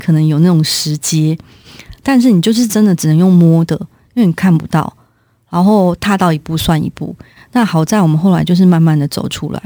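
Throughout the speech there is sample clock jitter: an unsteady converter clock of roughly 7 microseconds takes samples early or late, leaving a rough hiss about 30 dB below the signal. Unlike a steady noise floor, it swells on loud, bright sounds and disappears in pauses.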